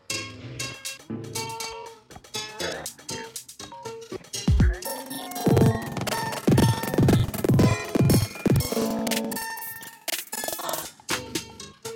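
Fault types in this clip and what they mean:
Planar audio read as interleaved, 4.85 to 10.85 s: each stretch of audio stores its left samples and then its right samples, but playback treats them as alternating left-right pairs. Each block of about 85 ms, which fits a 4096-sample block, plays twice at double speed, first the left half and then the right, so the pace holds while the sound jumps an octave (12 semitones) higher, with a flutter at about 11.7 Hz.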